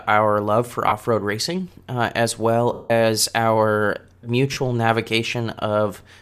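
The speech has three dropouts from lost LE Audio frames. At 0.89 s a 30 ms gap is covered by the decoder repeating the last spectrum with scrambled signs. It sounds like a brief noisy smear. At 2.73 s a longer loss of 170 ms runs to 2.91 s. The repeated spectrum fades, so the sound turns hissy and dies away before returning. At 4.53 s a 40 ms loss gives another short smear. The gap lengths fit 10 ms frames, as in LC3, likely the codec in use.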